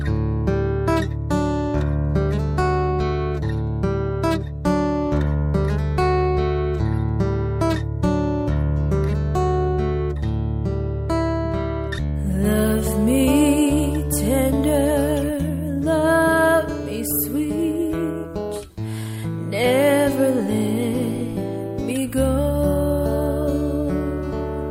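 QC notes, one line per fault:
No audible technical faults anywhere in the signal.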